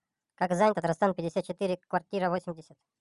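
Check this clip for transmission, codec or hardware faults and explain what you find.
One fault runs throughout the speech: a wrong sample rate. Playback runs 1.45 times too fast with no rate conversion, consistent with 22 kHz material played at 32 kHz. Pitch rises by 6.45 semitones along with the speed, so voices sound high and hurried.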